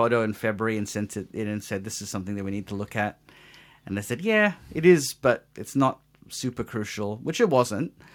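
Nothing to flag here: the speech runs along without a single technical fault turning up anywhere in the recording.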